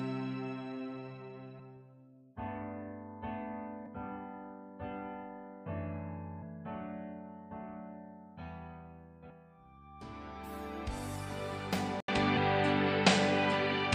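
Damaged data in the compressed stream causes a brief fault at 1.58 s, from 3.86 to 3.88 s, and at 6.41 s and 9.29 s. Each time, corrupted bytes make the decoder misread a frame and lose sync, then hunt for the next valid frame header. The result is a short chirp or blip lasting well under a tenth of a second.

At 12.00 s the input was likely switched to a poorer device. After a gap of about 80 ms the sound returns narrower and duller, with nothing above 9.1 kHz, a level shift of a few dB, and a new background noise floor about 50 dB below the signal. This duller quality lasts to the end.

At 12.36 s, within that section, the stream corruption produces one more blip.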